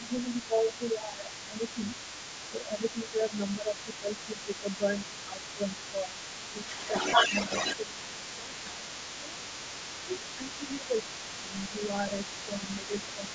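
From 0.0 to 13.34 s, a second, fainter voice runs under the main talker, about 15 dB below it: the other side's voice leaking through. The likely cause is that the far end, played on the talker's loudspeaker, reached the microphone and the echo canceller failed to subtract all of it. Unlike crosstalk or a background talker in the room, this voice is the remote party's.

Over the same stretch, the talker's own speech is ducked while the two sides overlap. This is speech suppressed in double talk. From 0.0 to 6.74 s, roughly 4 s of the speech dips, by around 10 dB at its deepest. Between 7.3 and 9.42 s, about a second of it drops by around 15 dB. From 10.06 to 11.88 s, around 0.7 s is pulled down by roughly 10 dB. From 12.45 to 13.3 s, about 0.7 s dips by only around 5 dB. The likely cause is that the canceller could not tell its own talker from the loudspeaker echo and attenuated both. This differs from packet loss or dropouts, since the level sags and recovers in step with the overlapping voice rather than cutting to silence at random. 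The call's microphone processing leaves nothing above 8 kHz in either voice.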